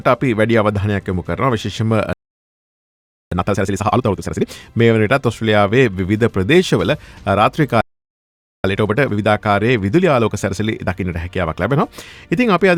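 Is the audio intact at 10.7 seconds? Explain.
No. At 10.7 seconds the audio sits inside a stretch of time-compressed catch-up that runs from about 8.64 to 11.64 s. After a stall, the player trims its backlog by cutting out small pieces of sound and cross-fading across the joins. Here it plays at 1.1 times normal speed. The pitch stays where it should be. The result is audio that sounds hurried for those three seconds.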